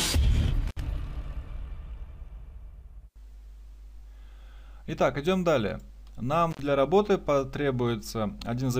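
An intermittent contact, likely a loose cable or plug, briefly breaks the signal path twice, so the sound drops out with crackle at each edge as the connection opens and closes. The first break spans 0.67 to 0.80 s, with the line open for about 60 ms, and the second spans 6.51 to 6.60 s, open for about 64 ms, leaving faint hiss in the gaps.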